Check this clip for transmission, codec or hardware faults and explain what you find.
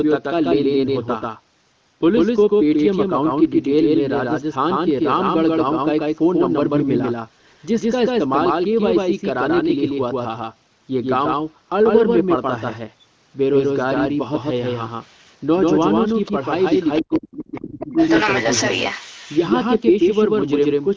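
Three faults are present: a doubled track throughout, leakage of the far end's voice, and speech suppression during double talk.

Doubled audio track. It runs through the whole clip. A second full-band copy trails the speech by roughly 150 ms, at about the same level. It has no decay or room colour. The likely cause is a second, slower capture path or a misaligned edit. Every syllable gets a flat slapback.

Other side's voice leaking through. It occurs at 15.02–15.32, 16.06–16.31, 16.75–17.01, 17.55–17.59 and 17.97–19.48 s. The far end's loudspeaker sound likely survived incomplete echo cancellation. The first scrap is very faint. The middle ones sit well below the talker. The last is nearly as loud.

Speech suppressed in double talk. From 17.01 to 17.98 s, both sides talk at once. The canceller likely mistook its own talker for echo and turned everything down. The talker's voice drops by as much as about 40 dB for roughly a second.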